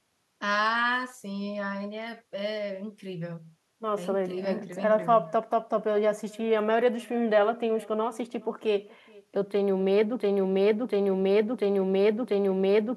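Throughout the speech there is echo with no canceller. A thin copy returns roughly 0.4 s later, about 25 dB quieter, from a far-end loudspeaker.

From 10.20 s to the end, a broken-record loop takes over. A 0.69 s fragment repeats four times back to back. A stalled stream likely caused it, and the real audio is lost.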